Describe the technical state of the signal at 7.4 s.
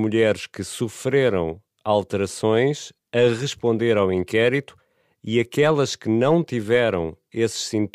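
At 7.4 s the speech signal is intact, with no audible fault at that moment.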